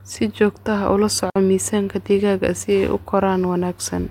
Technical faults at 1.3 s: digital wireless dropout

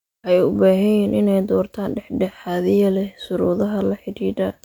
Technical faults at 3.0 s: none

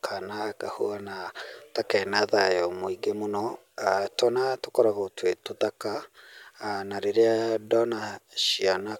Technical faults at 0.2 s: none

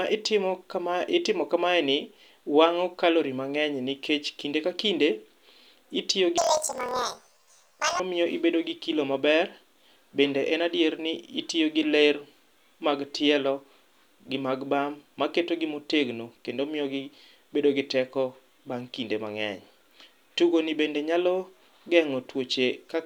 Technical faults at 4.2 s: none

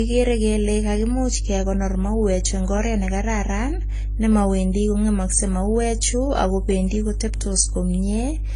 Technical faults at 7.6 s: mains hum; transcoding between lossy codecs

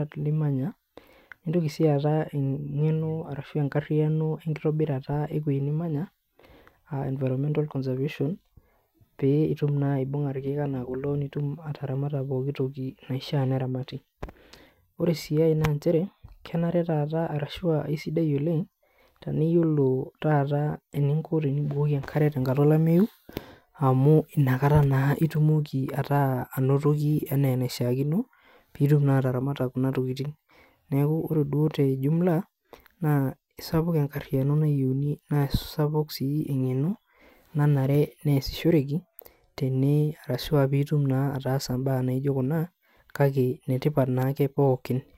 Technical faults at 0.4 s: none

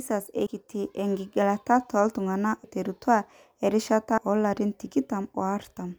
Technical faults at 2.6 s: compressed frames skipped

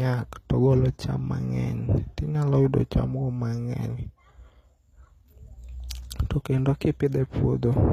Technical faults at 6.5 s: HE-AAC compression

